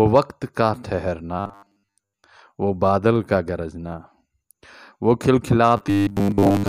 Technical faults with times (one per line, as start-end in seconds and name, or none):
1.40-2.24 robotic sound from repeated short buffers
5.77-6.69 robotic sound from repeated short buffers